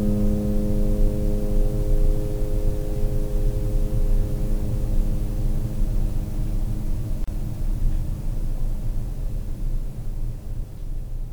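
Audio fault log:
7.24–7.28 s, gap at a join of encoded pieces: the music drops into a 34 ms gap with smeared edges, then resumes; untrimmed encoder delay and final-frame padding stayed in.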